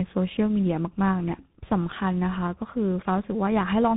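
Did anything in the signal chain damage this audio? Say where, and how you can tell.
Yes, at the codec stage. Throughout, the speech sounds rough and noisy, with nothing above 3.8 kHz. That points to tandem speech coding, likely a GSM full rate link, then G.711 mu-law, then CVSD, each decoding and recoding the previous link's degraded output.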